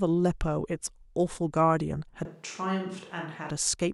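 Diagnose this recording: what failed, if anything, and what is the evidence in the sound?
From 2.25 to 3.50 s the speech turns roomy and about 5 dB quieter, with faint room noise. Capture stage, likely a switch to a distant microphone.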